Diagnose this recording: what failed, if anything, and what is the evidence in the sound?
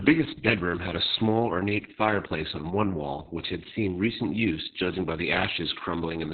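The speech is muffled and boxy from start to finish, with a hoarse, buzzy, slightly robotic edge and no air or sibilance at all. This is Opus voice compression failing at the codec stage. The sound points to the SILK linear-prediction coder running at a very low rate, around 6 kbps. At that rate it narrows the audio to narrowband, cutting everything above roughly 4 kHz, and quantises the excitation so coarsely that the voice turns rough and synthetic. The damage is heavy.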